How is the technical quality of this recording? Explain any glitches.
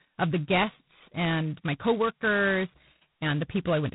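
The quality is poor. G.726 ADPCM coding damages the speech from start to finish. This codec does not store the waveform itself. It sends a few bits per sample describing the error of an adaptive prediction. Here the coarseness suggests the lowest-rate mode, which fits 16 kbit/s, about two bits a sample. The quantisation noise is heavy. A harsh, rasping hiss rides on the speech and rises and falls with its level. Nothing passes above 3.8 kHz, so the sound is dull and narrow.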